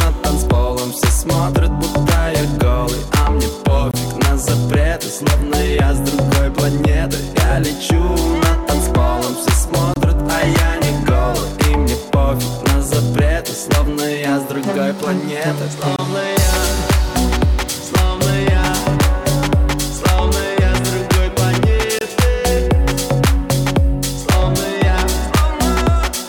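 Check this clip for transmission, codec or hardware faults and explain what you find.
The audio has one transmission fault, a gap between chunks, occurring four times.

Gap between chunks, at 3.91–3.94 s, 9.94–9.96 s, 15.96–15.99 s and 21.99–22.01 s. The audio appears to have been delivered in 6-second chunks, with about 25 ms of silence inserted at each join, from padding or a late start on playback. No sound is lost, but each join becomes a brief hole with abrupt edges, recurring at an even six-second rhythm.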